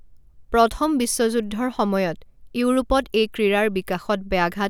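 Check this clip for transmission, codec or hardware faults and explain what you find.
No fault can be heard anywhere in the speech, and the signal holds steady and continuous throughout.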